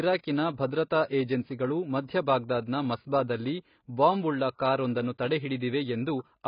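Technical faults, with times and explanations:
Throughout, AAC compression: the speech sounds dull and smeared, with nothing above 5.1 kHz and a warbling, fizzy texture on sustained sounds and sibilants. The likely cause is heavy AAC-LC coding, and a cut-off that low fits a bitrate around 16 kbps.
2.06 to 2.09 s, pre-echo: a short hiss runs about 30 ms ahead of a sharp attack, which sounds softened. The codec spreads quantisation noise over a whole block, so noise sized for the loud onset fills the quiet moment just before it.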